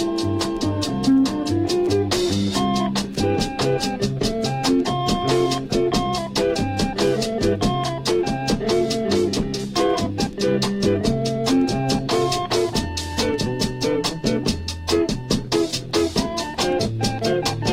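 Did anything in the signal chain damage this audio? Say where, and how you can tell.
No, nothing stood out on listening that would point to damage at any stage of the signal chain.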